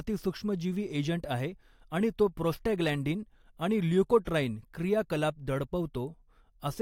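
No technical faults can be heard anywhere in the recording.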